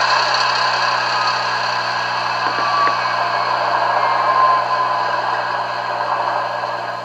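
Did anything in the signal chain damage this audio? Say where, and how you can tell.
Yes: mains buzz runs throughout, a raspy 60 Hz buzz roughly 20 dB below the signal, from switching spikes entering the analogue wiring twice per mains cycle.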